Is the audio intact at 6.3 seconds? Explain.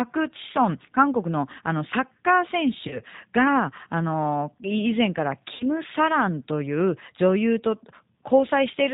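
No. At 6.3 seconds, as throughout the clip, the speech has passed through the G.729 codec, which fits the 8 kbit/s G.729A variant. Rather than storing the waveform, it resynthesises each 10 ms frame from a vocal tract filter, a pitch predictor and a handful of pulses, and it discards everything above 4 kHz. The result is plainly audible: muffled, band-limited speech with a rough, slightly synthetic buzz.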